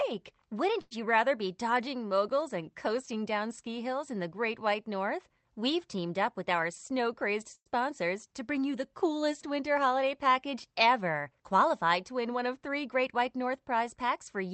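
At 0.81 to 0.93 s there is a short stall from a late packet: the last sound is stretched for about 95 ms with a faint buzz or dip, then carries on from the same place. Nothing is lost.

From 6.53 to 7.34 s comes a jitter buffer speed-up. The receiver trims pitch-period-sized slices, about 40 ms in all, to shed excess buffered delay. The sound runs 4% fast, yet keeps its pitch, which separates it from a resampling error.

At 7.55 to 7.68 s a call audio freeze follows. The sound continues as a fading buzz or hiss and then sits in silence for 70 ms of the 106 ms gap before resuming where it stopped. It was likely caused by packets held up in transit that emptied the jitter buffer. This one is longer and goes silent, where the stall only held the sound.

A second jitter buffer speed-up runs from 12.31 to 13.21 s at 6% faster, removing about 50 ms. It is a little more noticeably rushed than the first.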